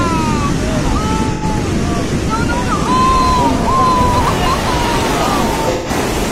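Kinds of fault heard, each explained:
AAC frame loss with concealment: Two short patches, near 1.33 to 1.44 s and 5.73 to 5.89 s, lose their real content, about 85 ms and 128 ms, which fits two and three lost AAC frames. The decoder papers over each gap by re-synthesising from the last good spectrum, so the sound turns smeared, noisy or phasey rather than dropping to silence or clicking, which separates it from a plain dropout or buffer underrun.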